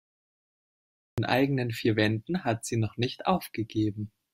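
From 0 to 1.18 s there is only digital silence. This is a cut-off start. Capture began late, after the talker was already mid-sound. At 1.18 s speech enters abruptly, partway through a sound, with no natural attack or fade-in.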